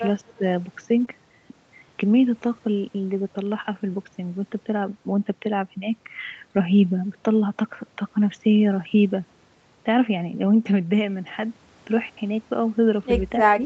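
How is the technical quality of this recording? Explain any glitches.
Three brief glitches cluster in the first 1.1 seconds of this speech recording, all within a call path whose audio stops at about 8 kHz, which fits wideband Opus at around 40 kbps.

From 0.38 to 0.42 s the level dips by roughly 10 dB for a few hundredths of a second. This is likely speech suppressed in double talk: the echo canceller could not separate the local talker from the overlapping far-end echo and attenuated both. Unlike packet loss, nothing smears or wobbles. The sound simply gets quieter.

From 1.01 to 1.03 s, a single 20 ms stretch turns grainier and noisier with no gap. That marks a lost packet rebuilt from error correction, where the decoder played a low-bitrate copy carried in the next packet. The result is rough but continuous, unlike concealment.

From 1.05 to 1.09 s there is short concealed packet loss. 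About 20 ms never arrived, and the decoder extended the preceding sound for roughly 12 ms before blending back. This gives a brief smear or wobble rather than coarse coding noise, and a short consonant there can disappear.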